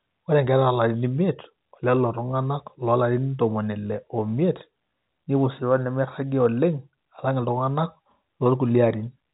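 No faults heard in this speech; the telephone band stops near 3.8 kHz, as expected of G.711 telephone coding.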